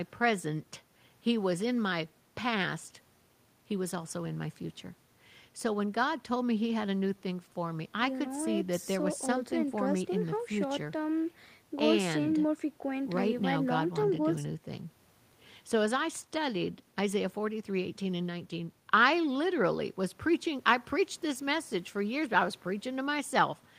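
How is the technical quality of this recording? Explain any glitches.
The technical quality of this recording holds up, with no glitches to explain.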